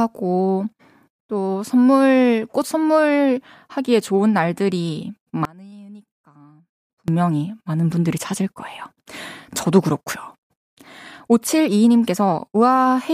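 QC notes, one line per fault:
5.45–7.08 s, one channel inverted: for about 1.6 s one stereo channel likely runs with its polarity flipped, so on a mono sum the material shared by both sides cancels instead of adding. The centred speech drops by about 26 dB and nearly vanishes, leaving only the small difference between the channels as a faint residue until normal polarity returns at 7.08 s.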